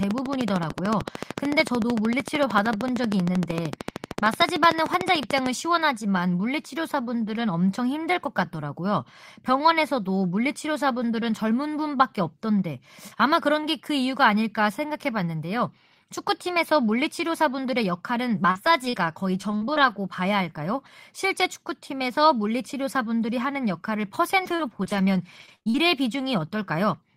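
From 0.03 to 5.47 s, something is likely injecting pulses into the signal path, such as interference from nearby equipment or a faulty connection or power supply. The result is a train of clicks: about 13 per second at a steady, regular spacing, around seventy in all. Each has much the same shape and peaks about 15 dB above the speech, so the ticking stays prominent over the talking and through the pauses.

From 18.35 to 19.92 s, packets are lost or arrive late again and again. Each hole is patched by extending the sound just before it: six gaps, the longest 41 ms, with about 158 ms filled, roughly a tenth of that stretch. Between 24.44 and 25.80 s the same repeated packet loss returns more heavily, with eight gaps, the longest 54 ms, and about 216 ms concealed, about 16 percent. Both stretches sound choppy, with pieces of speech missing.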